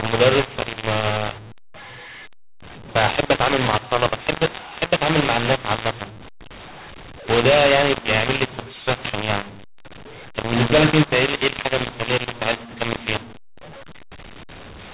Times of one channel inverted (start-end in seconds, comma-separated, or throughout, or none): none